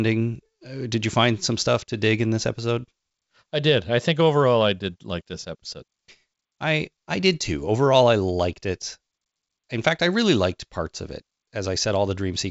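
No technical faults can be heard.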